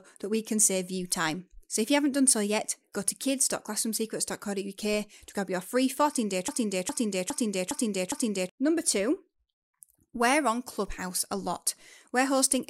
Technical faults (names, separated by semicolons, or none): broken-record loop